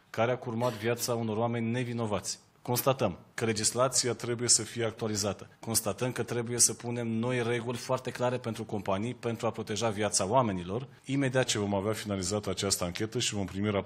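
The sound drops about 6.3% in speed and roughly 113 cents in pitch from 3.93 to 4.96 s, jumps about 6.3% fast and 106 cents sharp from 7.69 to 8.44 s, then slows and flattens again from 11.45 to 13.80 s. Each shift is a clean step of about a semitone that holds steady and snaps back. That marks a drift correction step, likely a clock-matching resampler refilling or draining its buffer. Tape wow or flutter would instead waver continuously.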